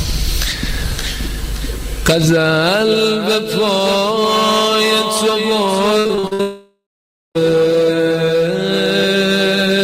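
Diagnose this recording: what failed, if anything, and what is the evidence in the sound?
The analogue power or ground path is picking up current draw from the USB bus, producing USB whine. The bus pulls current in 1 ms frames, and that ripple leaks into the audio path as a fixed-pitch tone on a 1 kHz fundamental. Its strongest component is the 12th harmonic at 12 kHz. The whine runs through the entire recording at roughly 40 dB below the signal, so it is audible as a thin, high, steady whistle under the audio.

From 5.99 to 6.41 s, the network stage shows repeated packet loss, heard as robotic sound. Six separate gaps open within that span, the longest 58 ms. The receiver patches each one by extending the preceding sound, and these patches cover about 57% of the stretch, roughly 235 ms of the 240 ms missing. Because the holes come so close together, the audio turns choppy, with fragments dropping out.

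Immediately afterward, from 6.41 to 7.37 s, a long network dropout is the likely cause of a stretch of about 0.94 s in which no real audio plays. At first the receiver continues the last sound as a fading buzz or hiss. For the final half second or so, only silence remains. When the audio returns at 7.37 s, it picks up further along, and nothing from the gap is recovered.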